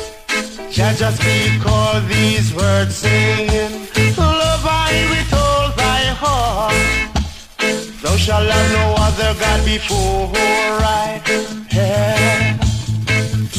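No technical faults can be heard anywhere in this audio. There is nothing to mark in time and nothing that went wrong to describe.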